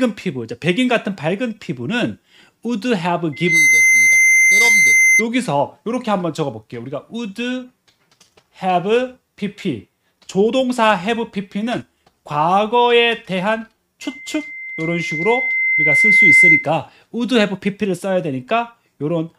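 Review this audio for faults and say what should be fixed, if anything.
Loudspeaker feedback squeal at 3.32–5.26 s and 14.01–16.69 s: a single 2.1 kHz tone swells as loop gain exceeds one, unlike steady interference tones. Lower gain or move the microphone off-axis from the loudspeaker.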